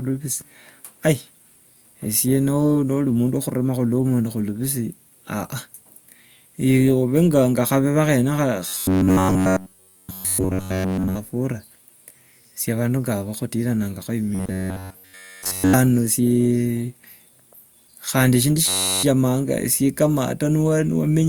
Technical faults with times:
8.68-11.16 robotic sound from repeated short buffers
14.35-15.73 robotic sound from repeated short buffers
18.66-19.03 robotic sound from repeated short buffers

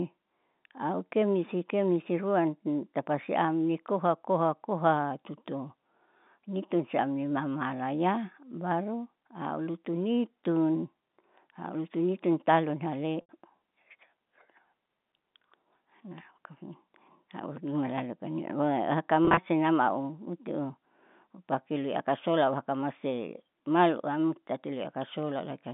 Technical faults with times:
13.21-13.29 packet loss with pitch repetition
19.25-19.37 packet loss with pitch repetition

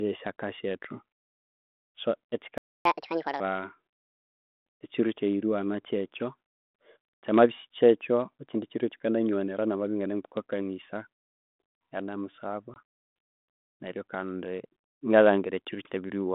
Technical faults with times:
2.58-2.85 playback stall
2.85-3.40 catch-up at higher speed
12.74-12.77 packet loss on an ADPCM call

